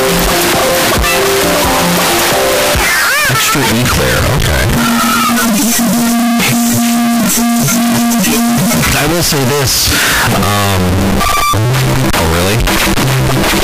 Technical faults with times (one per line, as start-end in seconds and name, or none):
0.00-13.64 signed and unsigned mixed up